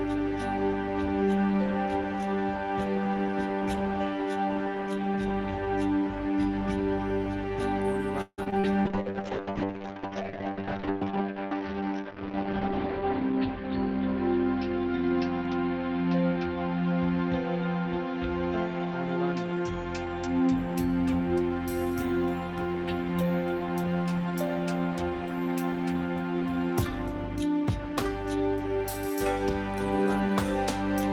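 From 8.21 to 8.65 s the sound turns choppy and robotic, with pieces missing: repeated packet loss, four gaps (longest 164 ms) patched by extending earlier audio over about half the stretch.

From 8.85 to 20.64 s the audio becomes rough and muffled. A call bitrate drop from 32 to 8 kbps lets the encoder keep only frequencies below 6 kHz, holding the lowest rate for 3.74 s.

Between 18.79 and 20.55 s the sound runs hurried at unchanged pitch. This is a jitter buffer speed-up to 107% that trimmed around 150 ms of short pitch-period pieces to reduce delay.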